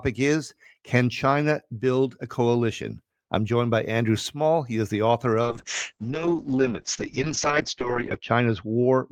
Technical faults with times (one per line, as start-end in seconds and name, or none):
5.42-9.11 call bitrate drop